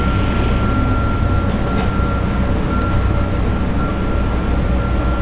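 At 2.82 to 2.84 s the audio makes a skip ahead: about a second of sound was discarded while later audio was already queued, so playback jumps forward with no gap. A spectrogram, empty above 4 kHz, shows an abrupt seam where the two sides of the jump butt together, and the waveform shows a sudden discontinuity.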